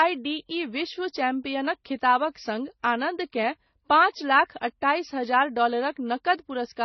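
A speech clip that runs the whole way through with a dull, band-limited sound: there's nothing above about 6 kHz, and the swirly, watery smearing sits alongside a second, grainier layer of artefacts. That combination likely comes from transcoding between lossy codecs, which fits a low-bitrate MP3 around 24 kbit/s re-encoded to AAC-LC around 32 kbit/s. The AAC pass wastes bits re-coding the MP3's damage, and the 6 kHz ceiling never comes back.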